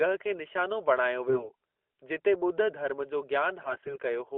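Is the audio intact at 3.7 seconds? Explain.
No, there are AMR bit errors from 3.62 to 3.98 s. Flipped bits in weakly protected parts of each frame, roughly 7 percent, misplace the excitation pulses and skew pitch, gain and spectral detail. The speech keeps its level but turns hoarse and gargly. A spectrogram would show smeared, noisy texture below the narrowband 3.5 kHz ceiling, with a roughly unchanged waveform envelope.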